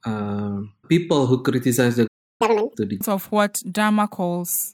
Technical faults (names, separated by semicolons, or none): playback stall; catch-up at higher speed; stream segment skipped